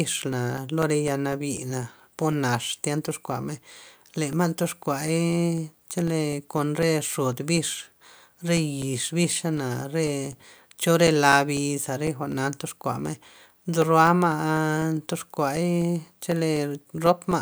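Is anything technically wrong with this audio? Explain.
Yes. Periodic USB or driver dropouts run from 0.08 s to 17.32 s, every 0.25 s: something stalls the USB bus or audio driver, and roughly 2 ms of speech becomes silence each time. It's heard as steady ticks during speech. The waveform shows evenly spaced flat gaps, and the spectrogram shows regular thin vertical lines.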